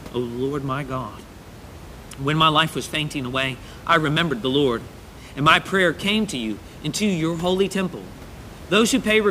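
No technical faults in this speech clip; the only thing under the speech is the room's own background noise, sitting about 19 dB below it.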